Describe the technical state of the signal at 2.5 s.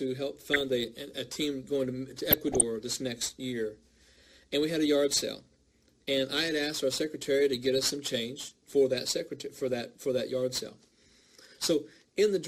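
At 2.5 s short blips of noise pop up as single frequency bands leap in level for a moment. This is DAB burbling, running from 2.26 to 2.62 s: with weak reception, bit errors at around 0.2 percent slip past error correction into the MP2 data, corrupting samples and scale factors so individual sub-bands jump in level for up to a frame.

Underneath, and through the whole clip, the audio is dull with a gurgling, granular texture as upper bands drop in and out. That points to MP2 compression, likely at about 80 kbps, where too few bits leave upper sub-bands switched off and the remaining ones coarsely quantised.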